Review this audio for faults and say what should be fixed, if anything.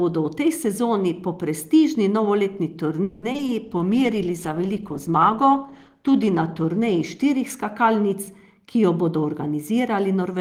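Repeated packet loss (robotic sound), 3.03 to 3.50 s, right after "sezoni po prestižni novoletni": four gaps in under half a second, the longest 190 ms, were filled by extending the preceding audio. About 250 ms was patched this way and 60 ms dropped outright, so just over half the stretch is synthetic. The speech turns choppy, with pieces missing. Prevent it with forward error correction and a path with less loss.

Call bitrate drop, 3.67 to 8.22 s: the voice turns rough and watery and loses its top end. It bottoms out for about 2.2 s before recovering. That fits an encoder told to spend far fewer bits, from about 32 kbps down to 13 kbps. At that rate the coder quantizes more coarsely and trims the high frequencies. Prevent it with steadier bandwidth estimation and a higher minimum bitrate for speech.

Jitter buffer speed-up, 8.50 to 10.22 s: the speech runs about 6% fast at unchanged pitch and sounds slightly hurried. 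The receiver's buffer had built up excess audio and trimmed it away in many small pitch-period cuts, about a tenth of a second in total. Prevent it by smoothing packet delivery so delayed packets don't arrive in bursts, or by draining the buffer more gently.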